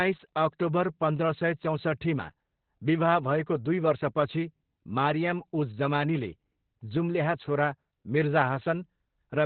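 Opus voice compression runs through the whole clip. The speech has been squeezed through a linear-prediction coder into a narrow band with nothing above about 4.3 kHz, and its excitation is coded coarsely, which fits a rate near 8 kbps. Voices sound muffled, hoarse and faintly robotic throughout.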